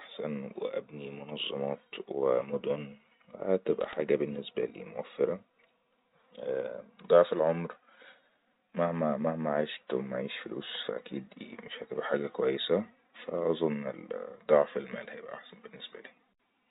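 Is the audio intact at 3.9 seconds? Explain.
No. From 3.81 to 3.96 s there are bit errors on a digital phone line. Roughly a third of a percent of the bits in the G.711 stream are flipped. Each one corrupts a single sample, so hits on sign or high-order bits give sharp ticks that cluster into brief crackle over the speech.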